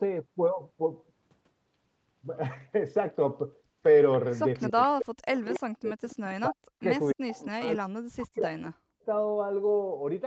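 From 4.13 to 4.68 s, 5.37 to 5.59 s and 6.09 to 6.35 s there's an echo leak: a faint copy of the speech arriving 288 ms late, about 20 to 25 dB down, likely from a loudspeaker the canceller didn't fully catch. Overlapping that, from 4.70 to 6.03 s and 6.47 to 9.08 s, you get speech suppressed in double talk. The voice sinks very deeply or cuts out in chunks, likely the canceller ducking its own talker along with the echo.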